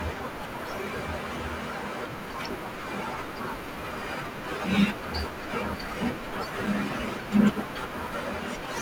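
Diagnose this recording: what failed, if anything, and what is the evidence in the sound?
Something failed at the driver or buffer stage. At 6.66 s the speech drops out briefly: a block of digital silence about 5.8 ms long, which fits a 256-sample buffer. Because the sound cuts straight to silence and back with no fade, at this length it is heard as a tick or dip rather than an audible gap. The likely cause is an output buffer that wasn't filled in time.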